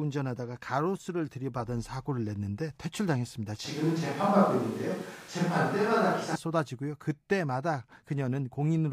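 A switch to a distant microphone runs from 3.65 to 6.35 s. The speech abruptly turns roomy and hollow, with thinner low end, then snaps back just as suddenly. This likely happened because the close microphone's signal dropped out and a pickup further away took over. Overall loudness stays about the same, but more room reflections and background noise come through, with the noise sitting roughly 25 dB below the speech for those seconds.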